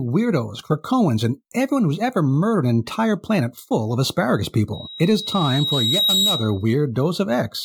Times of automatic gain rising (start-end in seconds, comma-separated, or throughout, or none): none